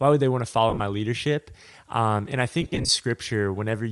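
Across the whole speech clip the upper spectrum sounds thinned and patched with noise, giving consonants and vowels a grainy, breathy edge. That is likely Bluetooth LC3 compression: the transform codec drops high-frequency detail it cannot afford and fills the gaps with synthetic noise. The damage is plainly audible and fits a 7.5 ms frame at a rate near 48 kbps. Unlike MP3-style pre-echo or swirly artefacts, the texture is a steady noisy haze.

From 0.70 to 0.80 s, just after "would they want to", lost LE Audio frames break up the sound. About 75 ms of audio is missing, scattered over roughly 105 ms, with the longest gap around 40 ms. From 2.62 to 2.89 s, after "and I", a worse patch loses about 172 ms spread over 270 ms, with runs up to about 50 ms. The decoder repeats the last spectrum with randomised signs, so the sound turns into a brief noisy smear that fades rather than cutting to hard silence or clicking, which sets it apart from plain dropouts.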